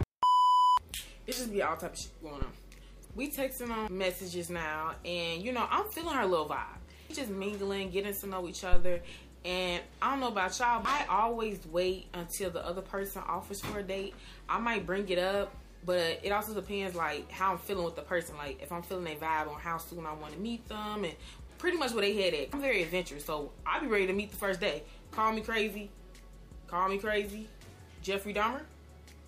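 Phantom power thump at 2.42 to 2.48 s and again at 8.73 to 9.03 s: a supply switched on a live input pushes a voltage step through the coupling capacitors. Each is a deep thump, peaking at about -20 dBFS then about -10 dBFS, decaying over 13 ms and 67 ms.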